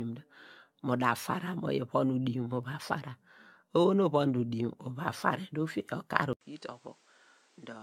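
From the first moment, the speech carries generation loss. It was likely decoded and re-encoded around five times with a lossy codec. The texture fits an AAC-LC chain at 96 kbit/s. Each pass quantised again on a shifted frame grid. The errors piled up. The result sounds swirly and hollow, worse than that bitrate should give. Consonant attacks are smeared rather than crisp.

At 6.33 s there is a gap of 80 ms. Then the input switched to a poorer device, likely a different microphone or a headset call profile. Nothing remains above 9.8 kHz, so the top end turns dull and boxy. The level falls by about 10 dB. A new background noise sits roughly 30 dB under the signal. This lasts to the end.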